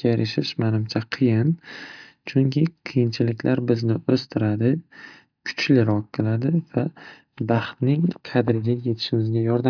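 Nothing in the recording stands out as a technical fault at any point, so there's nothing here to pin to a timestamp.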